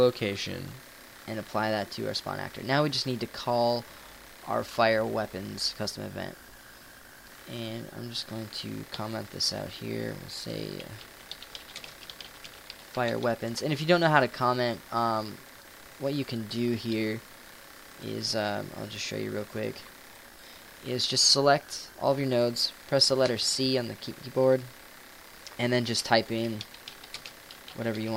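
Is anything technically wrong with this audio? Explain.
Yes. From 0.72 s to the end at 28.17 s, the audio has a wrong sample rate: it runs about 1.09 times fast and 1.47 semitones sharp, which fits 44.1 kHz material played at 48 kHz without conversion. Speed and pitch rise together, so the sound is hurried and high.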